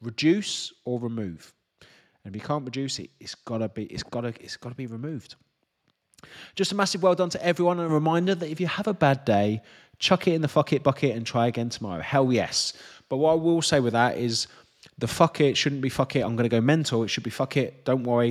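At 5.09 s, just after "it's got to be", a handful of samples were likely dropped from the stream, so the waveform jumps abruptly and one sharp click is heard. At 7.89 s the call software stepped the microphone volume up in a single move, lifting voice and background together by about 6 dB. The same dropped-samples click returns at 15.91 s, after "fuck it shouldn't be", and at 16.76 s, after "i'm going to go".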